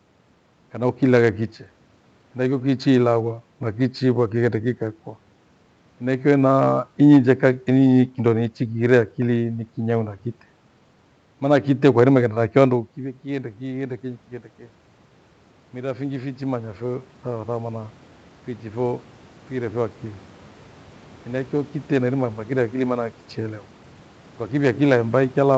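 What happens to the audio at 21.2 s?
At 21.2 s the automatic gain control is partway through a slow climb that runs from 15.72 to 23.71 s. After the input fell by about 13 dB, when the talker moved back from the microphone around 12.5 s, the control judged the level too low and kept raising its gain, by about 8 dB in total. So the speech and the room noise behind it swell together, steadily louder across those eight seconds.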